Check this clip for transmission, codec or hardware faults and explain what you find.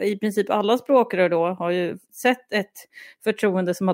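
Nothing faulty can be heard in this speech.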